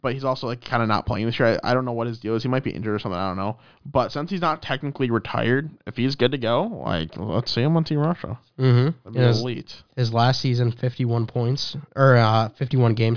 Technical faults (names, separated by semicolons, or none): none